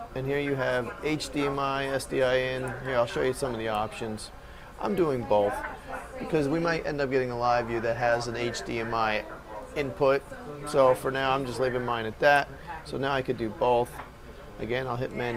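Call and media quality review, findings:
Nothing stood out on listening to the recording.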